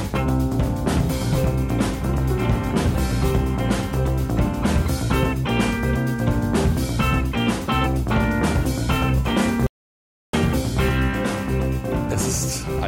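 An audio dropout to silence runs from 9.67 s to 10.33 s, about 0.67 s of lost material. The sound cuts off mid-flow into silence with no room tone, then resumes abruptly, likely because the input link failed while recording continued writing silence.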